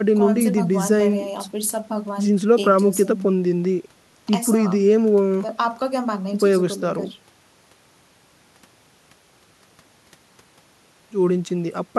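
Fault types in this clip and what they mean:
No technical faults can be heard in this speech recording; the signal stays steady and continuous, with no audible disruptions or defects.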